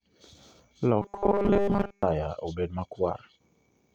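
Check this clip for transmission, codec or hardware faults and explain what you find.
One fault: robotic sound from repeated short buffers, 1.02 to 2.03 s. Audio likely arrived too seldom, so playback kept looping about 5 ms of the last buffer, skipping most of the real signal. That loop imposes a rigid 200 Hz metallic buzz that only loosely tracks the speech.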